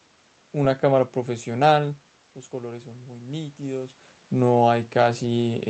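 Speech recorded over a call link, with one fault: automatic gain rising from 2.51 to 4.04 s. The voice dropped by about 11 dB as the talker moved back around 2 s, and the gain control answered by slowly lifting its level by about 3 dB across that stretch. Unlike a talker simply moving, the room noise swells along with the voice during the rise. The audio is band-limited at 8 kHz, consistent with an Opus call codec.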